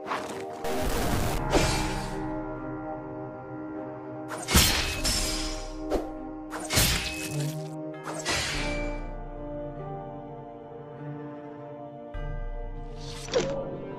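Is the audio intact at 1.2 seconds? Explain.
No. From 0.64 s to 1.38 s the sound turns harsh and buzzy, with a gritty distortion that follows the shape of the waveform. This is a stuck bit, likely a single data bit held at a fixed value by a broken line or converter. About half the sample values are pushed off by that bit's weight, a step of roughly 25 dB below full scale, so the error rides along with the signal as buzz.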